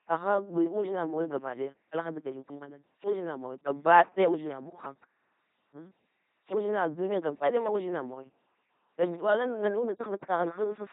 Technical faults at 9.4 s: LPC-10 vocoder

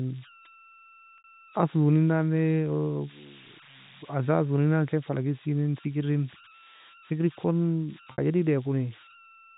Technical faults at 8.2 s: converter idle tones; packet loss with pitch repetition

